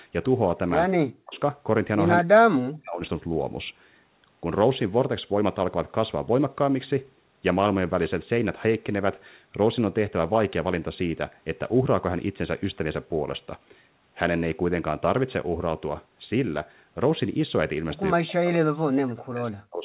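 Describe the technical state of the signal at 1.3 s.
At 1.3 s the speech is caught in a sharp dip running from 1.18 to 1.39 s, very likely speech suppressed in double talk. When both ends talk at once, the echo canceller can't tell the local talker from the loudspeaker echo and clamps down on everything. Here the level falls by roughly 40 dB for about a fifth of a second, so the sound nearly vanishes, on top of the narrowband, 4 kHz ceiling of the G.711 A-law link.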